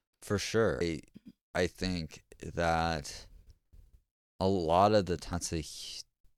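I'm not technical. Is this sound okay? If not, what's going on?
No. There is damaged data in a compressed stream at 0.81 seconds and again at 5.33 seconds. Each is a very brief chirp or blip in the speech. Audio like this is stored in small packed chunks. At those two moments some of the stored data was wrong, so the player misread it, lost its place, and had to hunt for the next good chunk before playing cleanly again.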